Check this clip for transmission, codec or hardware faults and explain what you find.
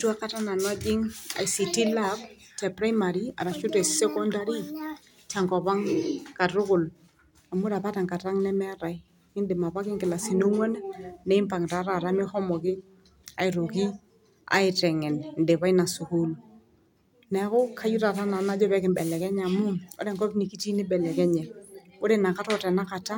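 Nothing stood out on listening to this speech recording.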